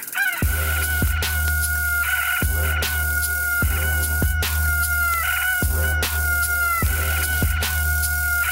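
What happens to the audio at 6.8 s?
Word clock ticks run through 6.8 s, part of a steady train from 0.16 to 8.49 s. The receiving device's clock drifts a couple of hundred parts per million from the sender's, so roughly every 0.1 s one sample is dropped or repeated, giving regular clicks.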